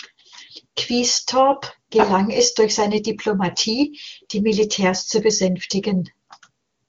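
Nothing stood out on listening to this speech, which carries the familiar HD Voice wideband character with its upper range stopping near 7.4 kHz.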